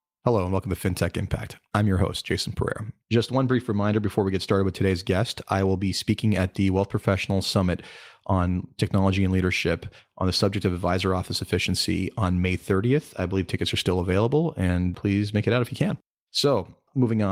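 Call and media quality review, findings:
No faults found in review.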